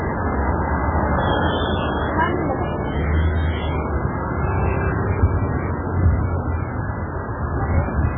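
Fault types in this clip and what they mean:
MP3 compression: throughout, nothing above 3.7 kHz and a heavy watery swirl, likely from a very low-bitrate encoder dropping weak frequency lines, unlike a clean low-pass filter.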